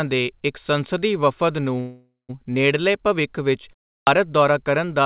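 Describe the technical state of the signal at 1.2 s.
At 1.2 s the speech is intact, with no fault at that moment; it passes through the narrowband call path that cuts everything above 4 kHz.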